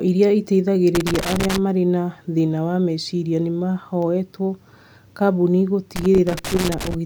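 From 0.95 to 1.58 s, and again from 5.96 to 6.94 s, the speech breaks into loose connector crackle. A worn or dirty contact is opening and closing as it shifts. The signal is chopped in rapid bursts. The result is irregular scratching.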